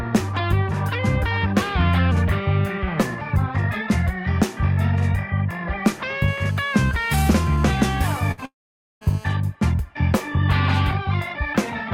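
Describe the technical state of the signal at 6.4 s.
At 6.4 s the signal carries GSM phone buzz, running from 6.28 to 9.29 s. A nearby 2G phone on a call transmits in bursts about 217 times a second. The audio circuit rectifies them into a steady, raspy 217 Hz buzz, rich in harmonics, about 22 dB below the sound.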